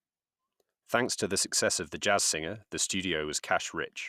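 No technical faults occur in the clip, so there is nothing to describe in time order.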